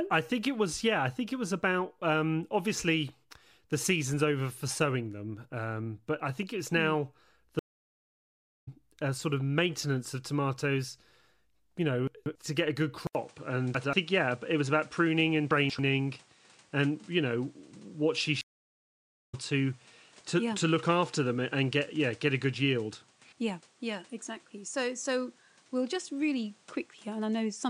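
At 7.59 s the connection broke in a stream reconnect. The player fell silent for about 1.08 s, started a fresh decoder mid-stream and came back about a second further on, so the speech jumps ahead at "uh sort of maintenance" with the skipped audio gone.

From 12.07 to 12.35 s, chunks out of order: a 93 ms block of audio arrived two chunks late and played after the ones meant to follow it, leaving a jumbled stretch just before "to get a good".

Right after "to get a good", at 13.07 s, an 80 ms gap marks what is likely an input switched to a poorer device. From there to the end nothing reaches above 10.5 kHz, so the tone turns duller, and a new noise floor sits about 35 dB under the speech while the level barely shifts.

Two more chunks-out-of-order events follow on this duller signal. At 13.75 to 13.93 s one 93 ms chunk plays a single chunk late, and at 15.51 to 15.79 s another plays two chunks late. 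Both give the same brief scrambled jolt.

At 18.41 s a second stream reconnect drops the sound for about 0.92 s. The speech then resumes roughly 0.7 s further into the stream, so a short piece is missing across the gap.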